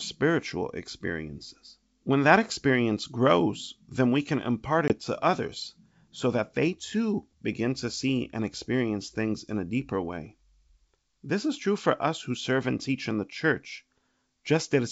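Speech, with a hard-edged gap from 4.88 to 4.94 s between "then we can impart" and "to others so that", after which the sound returns with brief, slight distortion. This is packet loss on an ADPCM call: about 20 ms of audio, roughly one packet, was dropped and filled with silence. The receiver's adaptive predictor and step size then briefly lost sync with the sender's and took a few tens of milliseconds to settle. The call itself runs over G.722 wideband coding at 64 kbit/s.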